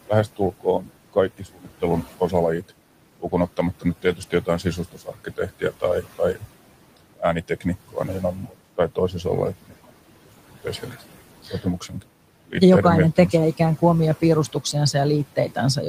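Noise suppressor artifacts run through the whole clip. The room noise, which sits about 16 dB below the speech, is pulled down by about 18 dB between phrases and returns under them, so it pumps instead of staying steady. Speech cut by the noise suppressor occurs from 0.08 to 6.44 s, from 6.97 to 12.55 s, and from 14.21 s to the end just after "kuin omia". Here the suppressor mistook quiet speech for noise and lowered it by up to about 18, 19 and 12 dB, across roughly 1.5 s and 1 s in total in the first two spans. Soft endings sound swallowed rather than fully silenced, unlike a dropout.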